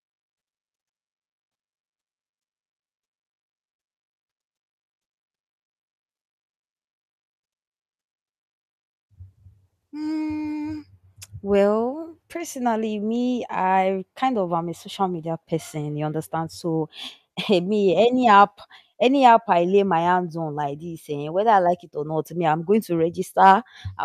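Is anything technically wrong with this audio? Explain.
No, nothing is technically wrong with this audio.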